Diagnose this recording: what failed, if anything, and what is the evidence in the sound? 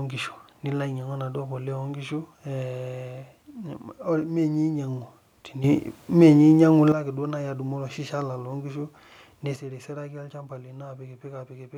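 A sudden gain jump: speech and background noise rise together by about 10 dB from 5.64 to 6.92 s, then drop about 7 dB from 9.56 s onward. The waveform envelope and spectrogram step at sharp vertical edges, likely from unramped digital gain in processing.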